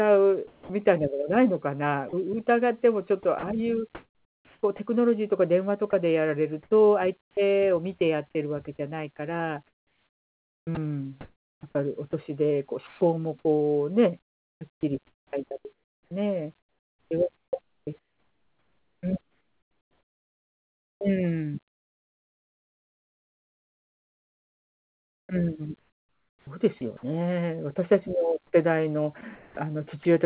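Right at the start, from 0.47 to 0.69 s, the speech gives way to steady hiss for about 220 ms, and roughly 150 ms of actual speech is gone. Then from 2.09 to 2.13 s there's another 40 ms gap, all of it speech. Both sound like sound dropped by the voice detector: the sender's detector likely decided those bits were background, stopped transmitting, and the far end filled in with comfort noise until speech triggered it again.

After that it gets choppier. From 3.23 to 4.79 s the speech keeps cutting in and out, with about 760 ms swapped for synthetic noise. From 5.91 to 8.01 s the dropouts are lighter, about 280 ms in total. The big one runs from 9.67 to 27.03 s, where roughly 11 seconds of that stretch is comfort noise, so the speech comes through in fragments. From 28.51 to 30.05 s it happens again, about 260 ms replaced. That's sound chopped by the voice detector, with its likely cause being the detector toggling on and off across quiet syllables and word edges. 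Throughout, the call path's band limit is audible, with nothing above 4 kHz, which fits G.711 mu-law.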